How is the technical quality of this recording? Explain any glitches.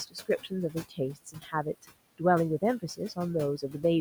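The recording has two related processing faults, both from aggressive noise suppression, and the room noise sitting about 19 dB below the speech is what the suppressor keeps reacting to.

Noise suppressor artifacts run through the whole clip. The suppressor judges each frequency band, frame by frame, as noise or signal and pulls down what it calls noise, here by about 18 dB. Because that judgement keeps shifting, the leftover background pumps down in the gaps and surfaces under the speech.

Speech cut by the noise suppressor happens three times: 0.07 to 0.52 s, 0.71 to 0.99 s, and 1.15 to 1.66 s. In each stretch the suppressor mistook quiet speech detail for background and attenuated it along with the noise, by up to about 16 dB in the first two and about 15 dB in the third. Roughly 150 ms, 150 ms and 200 ms of sound are affected, so that quiet speech detail comes across swallowed or faint.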